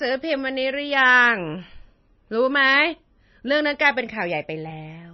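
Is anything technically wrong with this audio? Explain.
Yes. Throughout the speech, the sound is dull and watery, with nothing above about 5.9 kHz. This is likely MP3 compression, and the heavy damage fits a low bitrate near 24 kbps. Short of bits, the encoder cut the treble and dropped weak frequency lines frame by frame. That leaves a swirly, metallic texture on sibilants.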